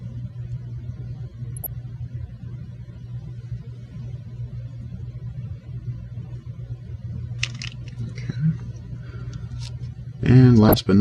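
Short blips of noise break through the sound at 1.57 to 1.69 s, 6.60 to 6.94 s and 10.63 to 10.79 s. This is DAB burbling: weak reception let a small fraction of bit errors slip past error correction, so individual MP2 sub-bands jump in level for up to a frame.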